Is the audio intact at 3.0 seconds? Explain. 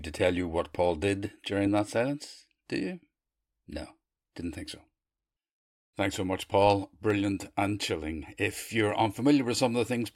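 No. 3.0 s falls within clock drift buffer slips from 0.12 to 9.44 s: likely mismatched device clocks drop or repeat a few samples every 1.16 s, producing regular clicks.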